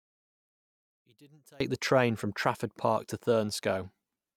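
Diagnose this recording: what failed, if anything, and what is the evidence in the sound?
From 0.0 to 1.6 s the speech nearly disappears, falling by about 31 dB and leaving only a faint residue. The likely cause is one channel inverted in the analogue wiring: summed to mono, everything common to both channels cancels.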